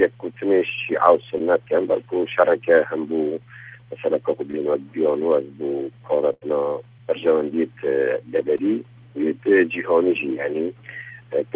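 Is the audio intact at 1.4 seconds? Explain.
No. From 1.38 to 1.41 s there is a short concealed packet loss. About 20 ms of audio never reached the decoder in time. The receiver covered 14 ms of that gap by extending the preceding sound, then blended back into the real signal. It is heard as a brief smear or wobble.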